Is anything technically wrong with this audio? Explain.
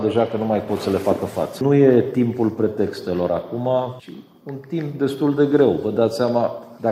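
No, nothing is technically wrong with this audio.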